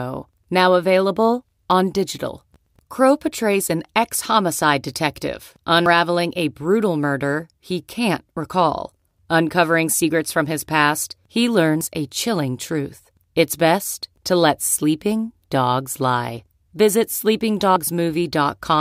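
At 5.86 s, between "an ex homicide detective" and "a brutal murder he", the speech skips forward, and it does so again at 11.81 s after "from his past he" and before "a chilling truth", and at 17.76 s. Each skip drops about 50 ms and joins the two sides with no gap, which is audio missing between chunks, likely from a recorder losing a piece every 6 s. On a waveform, each join shows as an abrupt splice, and the spectrogram shows harmonics jumping discontinuously at those three evenly spaced points.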